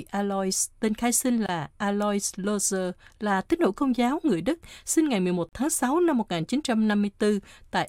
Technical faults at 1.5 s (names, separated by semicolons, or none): gap at a join of encoded pieces